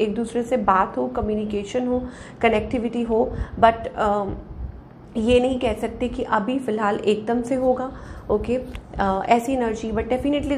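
From 7.32 s to the end at 10.57 s the audio takes on a gritty, inharmonic fizz that follows loud and bright passages. This is crude rate conversion by linear interpolation with no proper filter, fitting a 48 kHz to 44.1 kHz change, with error roughly 45 dB down. A spectrogram shows faint aliased lines unrelated to the harmonics.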